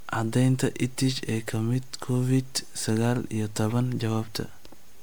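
Throughout the speech there is generation loss: a swirly, hollow smear with blurred consonant attacks, likely from around seven passes through a lossy MP3 codec at about 128 kbit/s. A spectrogram shows a hard ceiling near 19.9 kHz and flickering holes between harmonics.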